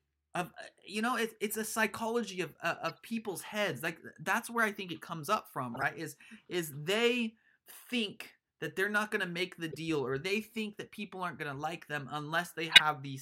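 Brief chirps and noise blips cut into the speech at 1.50–1.54 s, 2.88–2.95 s, 4.48 s, 5.74–5.83 s, 9.71–9.76 s and 12.72–12.81 s. The last is loudest, close to full scale, and the one at 4.48 s is faint. These are corrupt frames decoded: damaged bits spread energy to the wrong frequencies for a few frames each time.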